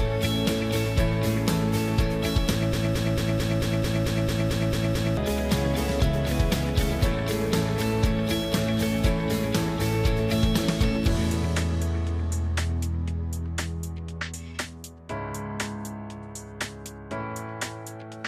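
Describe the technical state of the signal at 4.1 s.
At 4.1 s the signal sits inside a broken-record loop, 2.73 to 5.17 s: a 222 ms fragment repeats eleven times, likely from a stalled stream, forming identical tiled blocks on the waveform and spectrogram.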